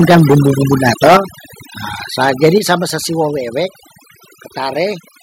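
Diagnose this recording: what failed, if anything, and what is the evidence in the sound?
Overdone noise removal at the call-processing stage throughout: over-aggressive band gating leaves a lowered background broken into twinkling specks.

Microphone overload at the converter, 0 to 1.17 s and 2.25 to 2.72 s before "be sesiwe": harsh, crackling peaks. Likely cause: input gain driving peaks about 13 dB, then about 5 dB, past full scale.

Microphone volume stepped down at 1.17, 2.58 and 4.92 s: speech and background drop abruptly, by about 8, 6 and 2 dB. Likely cause: call software cutting device input gain after finding the microphone too loud or clipping.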